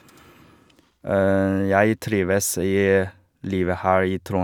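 No audible technical faults.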